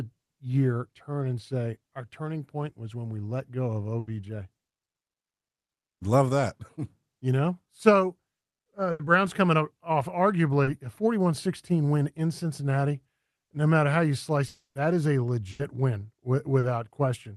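At 3.99 s, just after "we let go of", a burst of packet loss takes out about 80 ms. Several consecutive packets failed to arrive in time, and the receiver extended the last sound for 80 ms while fading it, so a held, dwindling buzz or hiss replaces the lost material and the speech resumes slightly further on. On a spectrogram the last sound's spectrum freezes into a steady pattern that thins out, then jumps abruptly to new content. The same burst fault returns at 8.91 s, again about 0.11 s long with an 80 ms fill.

At 10.63 s a short concealed packet loss of about 40 ms appears as a brief smear. The decoder bridged the small hole by continuing the preceding sound, pitched or noise-like, and cross-faded back into real audio. It reads as a tiny smear or wobble. In the waveform the envelope goes briefly smooth where fine detail should be, and the spectrogram shows a short blurred patch.

From 14.47 to 14.78 s, between "matter how you" and "is a", comes a long network dropout, likely caused by the connection stalling. 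The sound continues as a fading buzz or hiss for roughly 280 ms, and the last 150 ms or so fall to silence. Speech then re-enters mid-stream with that stretch missing. The waveform shows a decaying tail collapsing to a flat line, and the spectrogram shows a smeared band that fades into a blank gap before the speech reappears.

At 15.51 s, right after "is a", another burst of packet loss produces the same 80 ms held, fading buzz or hiss. A final short concealed packet loss at 16.59 s leaves another 40 ms smear. Throughout, the spectrum stops near 12 kHz, which fits a call codec running at a moderate bitrate.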